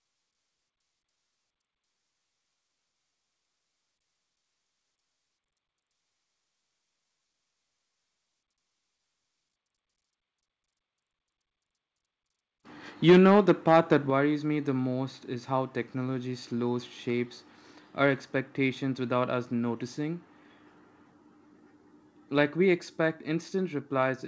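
From 13.08 to 13.97 s the microphone input was likely set too high, pushing peaks about 6 dB past the converter's ceiling so that roughly one sample in twenty is flattened. This microphone overload gives the loudest syllables a harsh, crackling edge.

At 13.1 s and again at 14.1 s, the call software likely reacted to those clipped peaks by lowering the device's input gain in single steps, about 2 dB and then about 6 dB. With the microphone volume stepped down, voice and background drop abruptly in level, the larger step landing just before "me the most is".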